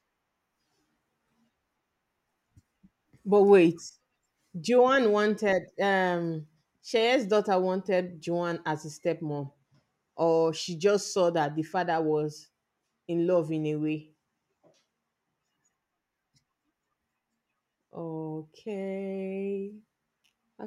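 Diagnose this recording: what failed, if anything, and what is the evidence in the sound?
Nothing failed, and the sound holds no evidence of any fault in this speech recording.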